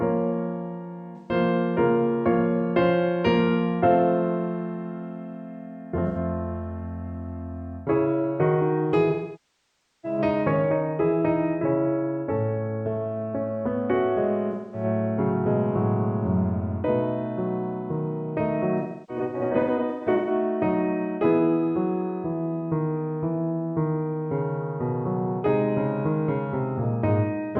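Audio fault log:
1.16–20.31 s, AAC frame loss with concealment: five dropouts, at 1.16–1.32 s (128 ms), 6.07–6.17 s (85 ms), 9.10–10.19 s (939 ms), 14.51–14.84 s (213 ms) and 18.78–20.31 s, where 896 ms is lost in bursts spread over 1.49 s, the longest around a third of a second. The decoder rebuilds missing audio from the last good spectrum, so short gaps sound smeared and phasey, while the near-second loss at 9.10 s decays toward silence and fades back. Spectrograms show blurred, frozen bands; waveforms show an envelope sag.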